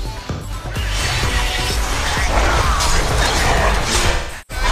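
A smeared, phasey patch from 0.29 to 0.50 s, and a longer unsettled stretch from 4.11 to 4.64 s where the sound repeatedly blurs and thins, with the worst gap lasting around a fifth of a second. Both are AAC frame loss with concealment. The decoder lost about 128 ms of frames early on, then about 341 ms scattered across 427 ms near the end, and patched each gap from the last good spectrum.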